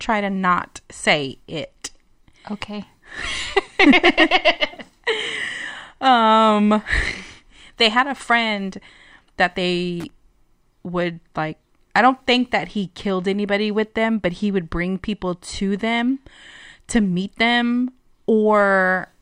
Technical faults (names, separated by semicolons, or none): loose connector crackle